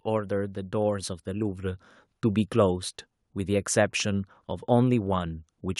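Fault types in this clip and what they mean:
automatic gain rising: the automatic gain control judged the incoming level too low and pushed its gain upward slowly rather than in one step, climbing about 6 dB between 0.15 and 2.51 s. Because the gain acts on the whole signal, the speech and the background noise beneath it grow louder together over those two-plus seconds, so the room tone swells along with the voice instead of staying fixed behind it.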